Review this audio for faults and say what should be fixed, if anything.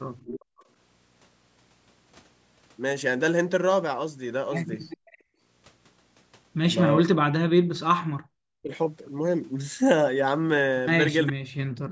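Echo leak at 0.17–0.45 s, 4.9–5.18 s and 11.27–11.33 s: a copy of the voice trails in about 410 ms late, roughly 10 to 20 dB under the talker. That's likely the far end's loudspeaker feeding its mic with the echo canceller not fully clearing it. To prevent it, the far end should use a headset or give its canceller a better-tuned echo path.

Background gated by the echo canceller at 0.45–0.67 s and 5.18–5.4 s, right after the first two echo bursts: the room tone drops out for about a fifth of a second, by about 39 dB and then about 25 dB, and comes back. The canceller is clamping the mic while the speaker plays. To prevent it, ease off the suppressor's attenuation and add comfort noise so the background doesn't vanish.

Speech suppressed in double talk at 7.02–7.6 s, 8.0–8.71 s and from 11.33 s to the end: the talker's voice sinks by something like 40 dB in chunks of half a second or more. 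This is likely both sides talking at once, with the canceller ducking everything. To prevent it, use a canceller with proper double-talk detection, or keep the far end on a headset.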